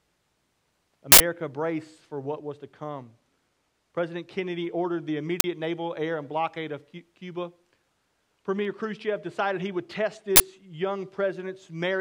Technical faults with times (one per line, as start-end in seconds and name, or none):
1.12-1.20 uninitialised buffer
5.40-5.44 uninitialised buffer
10.36-10.40 uninitialised buffer